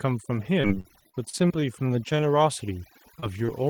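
Overdone noise removal runs through the whole speech clip. The suppressor pulls individual frequency bands down hard wherever they sit near its noise estimate, so the background drops and breaks up into twinkling specks, and quiet parts of the voice are stripped away.

From 0.61 to 1.64 s there is repeated packet loss with a robotic sound. Around a dozen holes, the longest about 43 ms and about 220 ms in total, are each patched by extending the preceding sound. Concealment covers roughly a quarter of the span, giving choppy speech with fragments missing.

Overlapping this, from 0.92 to 2.18 s, a jitter buffer slow-down stretches the audio by 103 ms. The receiver repeats pitch periods and pause fragments to rebuild its reserve, so speech runs at 92% speed at unchanged pitch, with drawn-out sounds.

Short concealed packet loss occurs at 3.20–3.24 s and 3.46–3.50 s, each hole about 20 ms. 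The decoder continues the last sound and crossfades back into the real signal, heard as a brief smear or wobble, and a short consonant may disappear.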